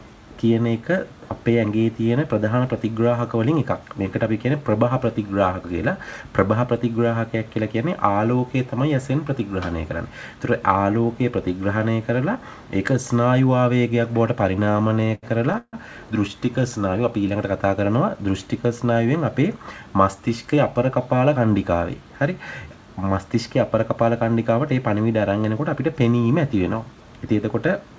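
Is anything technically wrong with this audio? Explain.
Yes. From 14.60 to 15.75 s there are repeated stalls (stutter). Packets arrived late, so the jitter buffer kept running dry, 13 times in all. Each time the receiver stretched the last sound, once for as long as 152 ms, so about 30% of that stretch is filled-in audio. Nothing is lost, but the sound drags and stutters.

From 19.05 to 19.79 s there is a jitter buffer speed-up. The buffer had built up too much audio, so the receiver cut out short pitch-period pieces, around 70 ms in total. The sound runs about 8% fast at unchanged pitch and feels hurried.

The call path itself, with nothing above 8 kHz, fits a 64 kbps G.722 codec.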